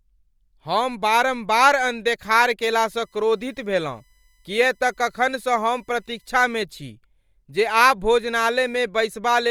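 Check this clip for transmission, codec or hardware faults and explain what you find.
One hardware fault is present. USB whine, 2.82 to 6.30 s, after "हम बारम्बार अनदेखार": 1 ms bus frames leak current through power or ground, adding a fixed-pitch 1 kHz whine, strongest at 2 kHz, roughly 45 dB below the speech.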